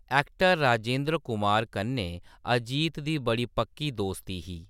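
A short speech recording with no audible technical faults anywhere in the signal.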